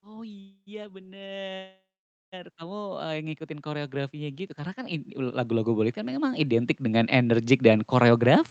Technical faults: automatic gain rising; call audio freeze; jitter buffer slow-down; jitter buffer speed-up

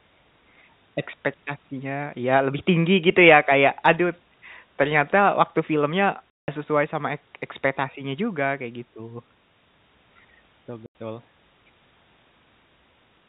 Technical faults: packet loss filled with silence

